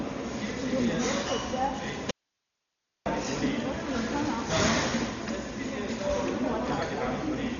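A recording of everyday sounds, dull throughout with nothing above 7 kHz and a rough, fluttering noise around tonal parts, the signature of heavy Dolby Digital compression, likely at a rate near 40 kbps, rather than a simple low-pass filter. From 2.11 to 3.06 s the sound cuts out abruptly for about 0.95 s, leaving hiss about 50 dB down. This is an audio dropout to a faint residue, likely a signal loss with the path still live, not a pause or fade.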